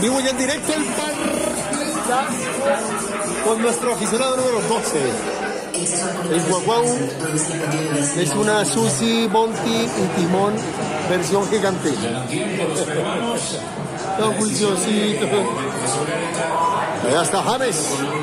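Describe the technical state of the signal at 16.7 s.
At 16.7 s the signal is intact, with no audible fault at that point.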